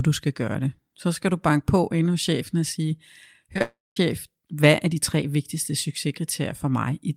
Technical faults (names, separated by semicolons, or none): short concealed packet loss; long network dropout